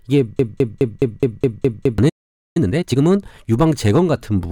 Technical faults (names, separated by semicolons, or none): broken-record loop; playback stall; time-compressed catch-up